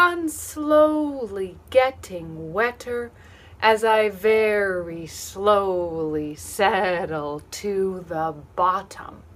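Nothing in the audio points to a technical fault: the signal holds steady throughout, with no audible breaks, distortion or disturbance anywhere in the recording.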